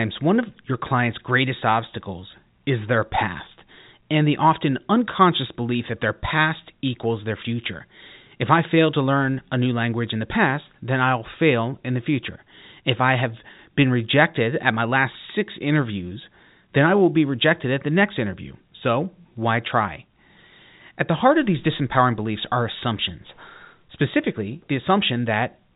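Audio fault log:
No faults heard.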